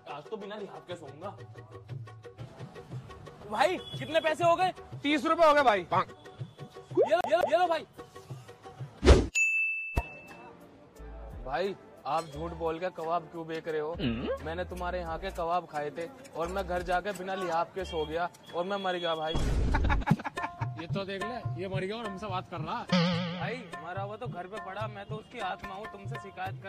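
From 7.21 to 7.62 s, the CD sticks on one turn: a 0.2 s slice repeats twice as the laser jumps back. The waveform shows identical blocks split by brief mute gaps.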